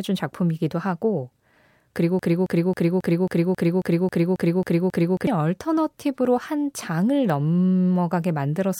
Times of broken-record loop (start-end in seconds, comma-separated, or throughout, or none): 2.19-5.27